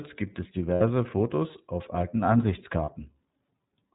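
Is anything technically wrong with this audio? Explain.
Yes. Throughout, the speech carries plainly audible iLBC codec damage: nothing above 4 kHz, with a rough, synthetic edge, consistent with 30 ms frames at about 13.3 kbps.

There are lost iLBC frames at 0.75–0.81 s, just after "gibt es", and at 2.85–2.89 s. The decoder repeats the last pitch cycle with noise, giving a brief buzzy, held vowel lasting 60 ms and 30 ms. That matches two frames and one frame lost.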